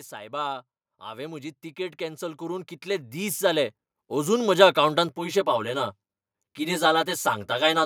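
A speech clip with two faults. From 0.1 s to 4.57 s, automatic gain rising is audible. The gain control judged the input too quiet and raised it by about 16 dB. Voice and background swell together, slowly, over those seconds. From 5.09 s to the end at 7.86 s, channel delay causes comb filtering. One channel lags the other by around 10 ms, and the two are summed to mono. Shared content cancels at evenly spaced frequencies, starting near 50 Hz. The result sounds hollow and phasey.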